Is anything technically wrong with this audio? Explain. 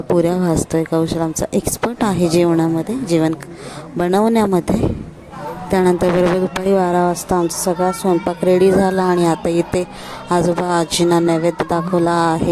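No, nothing is technically wrong with this audio.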